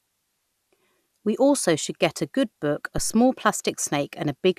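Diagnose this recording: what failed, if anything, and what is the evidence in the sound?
Analogue input stage: a phantom power thump at 2.98 to 3.19 s, a deep low thump decaying over about 48 ms as a supply step passes the coupling capacitors.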